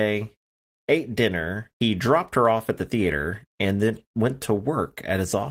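No technical faults can be heard anywhere in this speech recording. There is nothing in the audio that calls for a timed entry.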